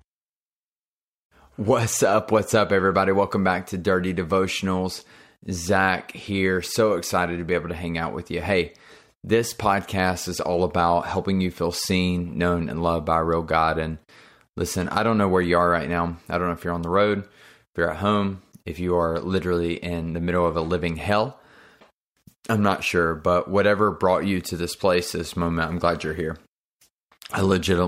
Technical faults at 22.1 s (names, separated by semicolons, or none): none